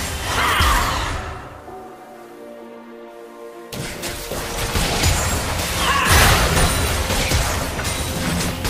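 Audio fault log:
1.16 s, compressed frames skipped: the decoder never played a short run of compressed frames, either because they were missing from the stream or because it rejected them as damaged. The audio jumps forward by around 70 ms, which fits about three frames of 26.1 ms each. Because adjacent frames overlap, the splice comes out as a brief smeared blip instead of a sharp click, with a small piece of the sound simply absent.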